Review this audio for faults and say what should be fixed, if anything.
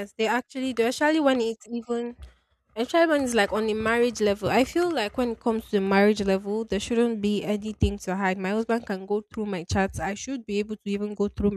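No faults found in the speech, so nothing needs fixing.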